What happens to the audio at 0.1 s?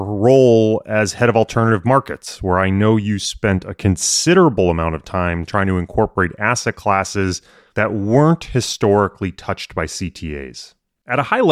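Nothing goes wrong at 0.1 s; the speech plays through that moment intact.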